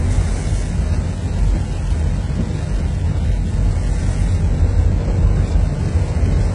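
HE-AAC compression runs through the whole clip and is likely the cause of its damaged high end. Only the lower part of the spectrum is coded directly; the treble is rebuilt by copying lower bands upward and shaping them with a coarse envelope, so its harmonics don't line up with the real ones. The top sounds bright but gritty and metallic, stops at 11 kHz, and the heavy damage fits a very low bitrate around 12 kbps.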